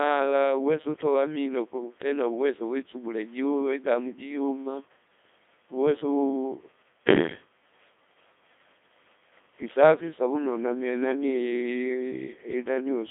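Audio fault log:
Throughout: Codec 2 vocoder. The speech has a robotic, buzzy quality because the waveform itself is gone. What is heard is sine-wave resynthesis driven only by pitch, voicing, energy and a coarse spectral envelope, and the heavy smearing fits a rate around 2.4 kbit/s. The band is confined to roughly 250 Hz to 3.6 kHz, with nothing above 3.8 kHz, giving a thin, radio-like tone.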